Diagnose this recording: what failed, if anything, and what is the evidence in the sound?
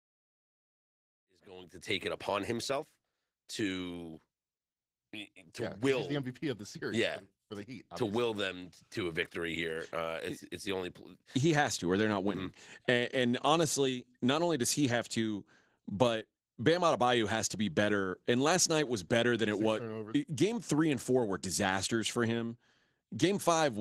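Codec stage: Opus voice compression throughout, from the fade-in (about 1 to 2.26 s) on. Coarsely coded excitation makes the speech hoarse and slightly robotic, which fits roughly 16 kbps hybrid mode.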